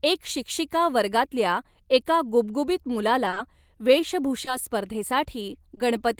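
At 3.30 s a sound is briefly held for 20 ms with a faint buzz or dip, a short stall from a late packet: the jitter buffer ran dry and the receiver stretched the last sound until the packet arrived, adding 20 ms of delay without losing anything. Straight after, from 3.34 to 3.38 s, and again at 4.45 to 4.49 s and 5.75 to 5.79 s, come brief smears or wobbles where 20 ms of audio went missing. These are short concealed packet losses: the decoder filled each gap by extending the preceding sound, then blended back into the real signal.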